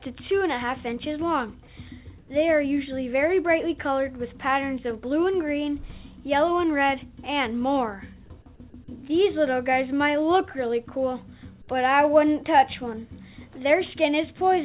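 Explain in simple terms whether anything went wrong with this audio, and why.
One short fault: from 2.18 to 2.3 s the real background is swapped for comfort noise, a smooth, featureless hiss that is a bit quieter. Unlike a dropout, the sound never falls to silence. It is likely a call system filling a pause it stopped transmitting.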